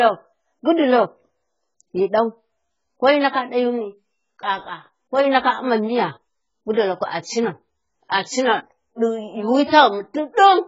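Throughout, the speech sounds dull and fizzy; a spectrogram shows a hard ceiling at 7.6 kHz, likely AAC compression at a very low bitrate.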